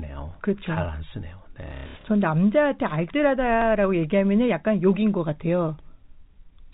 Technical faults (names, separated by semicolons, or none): packet loss with last packet repeated; dropped samples